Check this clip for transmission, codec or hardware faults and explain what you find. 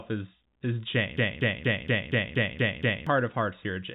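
One fault stands out in this speech clip, heard through a narrowband G.711 telephone path. From 1.17 s to 3.07 s a broken-record loop repeats an identical 236 ms fragment eight times back to back, likely because the stream stalled and resent its last buffer. Unlike decaying packet-loss concealment, the repeats never fade, and the speech they replace is lost.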